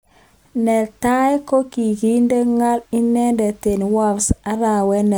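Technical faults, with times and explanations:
No technical faults can be heard anywhere in the recording.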